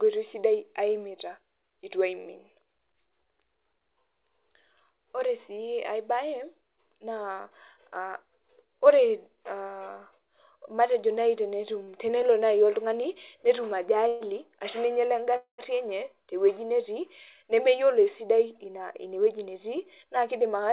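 At 11.84 s, right after "matejo nai", a short stall from a late packet holds the last sound for about 36 ms before the speech picks up exactly where it stopped. On a spectrogram the harmonics run flat for that sliver. The waveform shows a repeated cycle that decays faintly.

Two call audio freezes follow. From 14.07 to 14.24 s, after "nai oltung'ani netum", the sound smears into a 132 ms buzz. From 15.36 to 15.61 s, just before "enye tewueji", a 223 ms hold fades out and includes 110 ms of silence. Both likely stem from delayed packets draining the jitter buffer. The spectrogram shows frozen, fading bands, with a blank strip in the second freeze.

Jitter buffer speed-up then trims the built-up delay. From 17.43 to 17.83 s the audio runs 8% fast and sheds roughly 40 ms, and from 18.66 to 20.67 s it runs 6% fast and sheds around 150 ms. Pitch is unchanged, but delivery sounds slightly hurried. 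The waveform reveals small pitch-period splices, all beneath the call path's 4 kHz ceiling.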